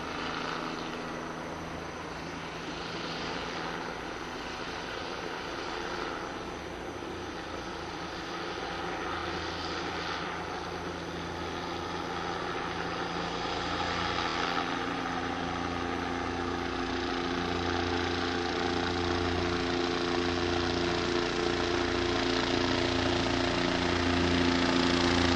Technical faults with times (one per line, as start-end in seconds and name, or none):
9.20-9.22 repeated frames
14.29-14.34 repeated frames